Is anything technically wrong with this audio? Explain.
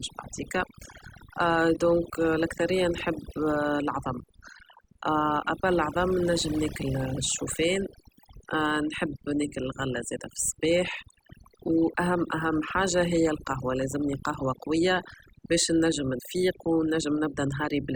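Yes. Throughout the speech, overdone noise removal suppresses bands near the noise estimate, taking quiet speech detail too, leaving twinkling near-silent gaps.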